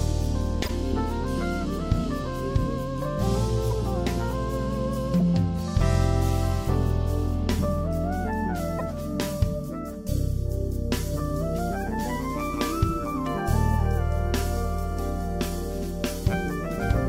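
At 0.63–0.70, 3.71–3.73, 5.19–5.22, 8.78–8.82 and 11.81–11.83 s, a corrupt frame decoded produces a short squeaky blip: damaged compressed frames play back with energy at the wrong frequencies. Unlike a dropout, wrong sound is added.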